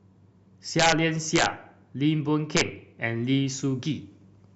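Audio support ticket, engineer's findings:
Integer overflow on speech peaks. Violent cracks at 0.79–0.92 s, 1.36–1.46 s and 2.57–2.61 s, harsher than clipping. Gain stage driven about 5–6 dB past full scale, and the samples wrap to the opposite sign instead of being limited. Probable component: fixed-point gain or mix sum without saturation. On the waveform, peaks jump rail-to-rail with vertical flips. On the spectrogram, broadband vertical streaks span the full frequency range at those three times.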